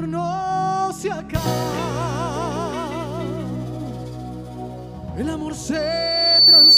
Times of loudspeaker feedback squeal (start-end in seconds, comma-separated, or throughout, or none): 5.73-6.77